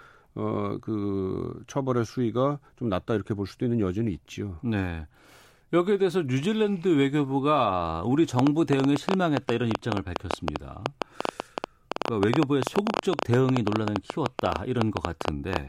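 Something in the signal chain, likely electrical interference from nearby equipment or a faulty connection or power supply, starts injecting short pulses into this speech recording at 8.39 s and keeps going until 15.57 s. The result is a train of clicks, about 9.8 per second at an uneven pace, some seventy in all. The clicks share much the same shape and peak roughly 20 dB above the speech, so they tick audibly over both the talking and the pauses.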